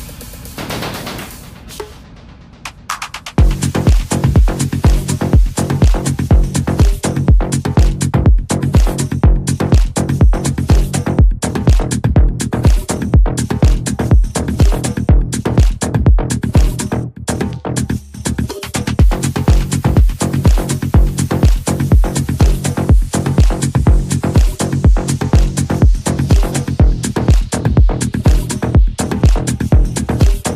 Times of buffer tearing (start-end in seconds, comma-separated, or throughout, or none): none